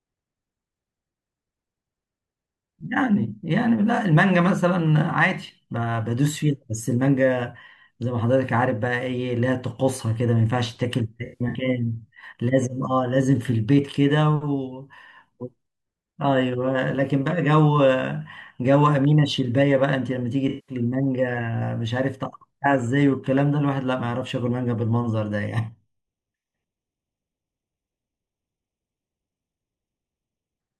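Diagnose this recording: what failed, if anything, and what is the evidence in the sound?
At the codec or network stage, AAC frame loss with concealment struck the speech twice. From 11.25 to 11.58 s about 0.15 s of audio went missing in scattered gaps, the longest around a tenth of a second; from 20.48 to 20.76 s about 0.19 s was lost. The decoder patched each gap from the last good spectrum, so both spots sound smeared, noisy or phasey.

During stereo-to-mono summation, channel delay (comb filtering) appears from 25.47 to 30.59 s: one channel arrives roughly 0.3 ms late, and summing cancels shared content at evenly spaced frequencies, with the first notch near 1.5 kHz. The speech turns hollow or phasey through that stretch.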